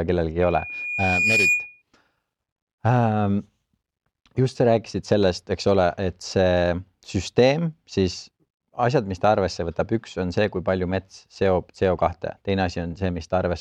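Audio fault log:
0.40–1.82 s, loudspeaker feedback squeal: a single 2.4 kHz tone swells over about a second until it sits roughly 5 dB above the speech. The microphone re-amplifies its own loudspeaker output, and that loop runs away at one frequency. Unlike a steady interference whistle, it grows from nothing.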